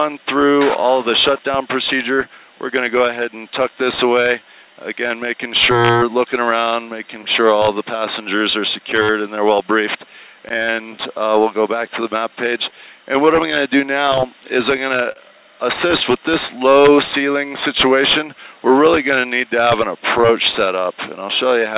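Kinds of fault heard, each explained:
Clock drift between sender and receiver: The sending device's audio clock runs roughly 3 percent slower than the receiving side's. The receiver's jitter buffer keeps draining, so the receiver has to keep stretching what it has. Throughout the clip, small timing hiccups recur at uneven intervals.
Repeated timing corrections: To keep in step with the slow sender, the receiver keeps repeating short slices of audio from 0.19 to 21.49 s. Every edit lengthens the sound, and together they add about half a second, so playback runs at roughly 98 percent speed. The edits are unevenly spaced and individually tiny. They come through, if at all, as slight hiccups or an unsteady tempo rather than as distinct glitches.
Scattered short gaps: Packets arrived late or went missing singly, and the receiver covered each hole by extending the last sound it had. This happens in three stretches: 0.70 to 3.03 s, 6.61 to 8.94 s and 13.14 to 20.69 s. 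There are a few gaps in the first two stretches and several in the last. Most are only a few milliseconds long, and the longest, near 40 ms, falls in the final stretch. They are heard as brief ticks or smears.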